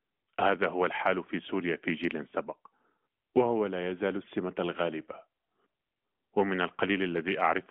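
There are no technical faults to describe in time order in this audio, which passes through an AMR narrowband mobile codec working as intended at 12.2 kbps.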